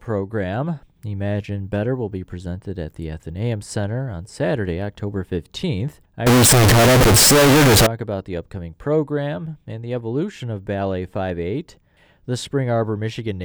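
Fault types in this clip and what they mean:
Float read as integer: from about 6.27 to 7.87 s the speech suddenly turns into a loud, harsh, buzzy blast, with the background noise pushed up as loud as the talking. Pitch still comes through, and it clears just before "about the upcoming program". The likely cause is 32-bit float samples being read as 32-bit integers, so the sign and exponent bits dominate and the waveform squares up at an almost fixed, high level.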